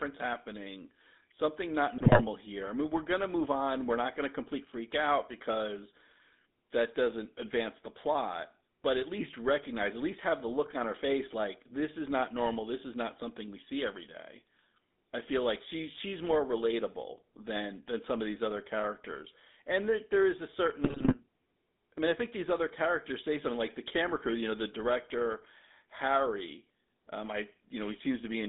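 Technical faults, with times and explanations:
Throughout: GSM full-rate codec. The audio sits in a band of roughly 200 Hz to 3.7 kHz, with a plainly audible buzzy, gravelly roughness. This fits the 13 kbps full-rate codec, which rebuilds the vocal tract from coarse filter parameters and drives it with a sparse, regularly spaced pulse excitation.
1.97–2.21 s and 20.84–21.15 s: GSM bit errors. During both bursts the sound breaks into squawks, pops and gargling. Corrupted filter, pitch and gain values distort the spectrum and level of each affected frame. The damage points to a few percent of bits flipped on a weak link, heavier in the second burst.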